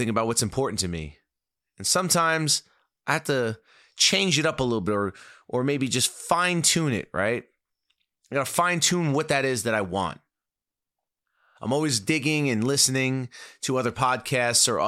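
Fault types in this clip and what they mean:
No technical fault can be heard anywhere in the speech, with the signal holding steady and continuous throughout.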